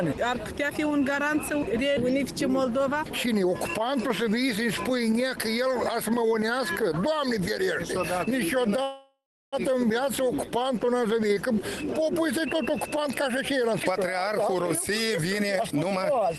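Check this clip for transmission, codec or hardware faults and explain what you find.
Two transmission faults can be heard, a call audio freeze and a jitter buffer speed-up.

From 8.83 to 9.55 s there is a call audio freeze. The sound stops moving forward. The last sound carries on as a fading buzz, then about 340 ms of near silence. This is likely packets stalling on the network until the jitter buffer ran dry. The receiver bridged roughly 0.7 s this way. When the audio resumes, it picks up where it stopped. Nothing is lost, but a gap has been inserted.

From 13.71 to 16.38 s there is a jitter buffer speed-up. The audio plays at about 117% speed, yet the pitch stays the same. It sounds hurried. The buffer had built up more delay than it wanted. To drain it, the receiver cut many short pitch-period slices in a row. About half a second was removed in total. Through both faults the call codec's usual coding noise is present, with highs limited to around 12 kHz.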